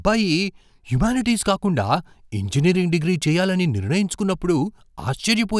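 Nothing in this speech recording trips any alarm; there's no technical fault to point to anywhere along the way.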